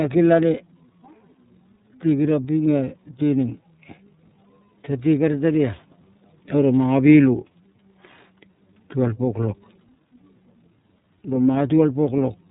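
Right through the speech you can hear the iLBC codec: nothing above 3.8 kHz, and a rough, synthetic edge, which fits its 30 ms, 13.33 kbps mode.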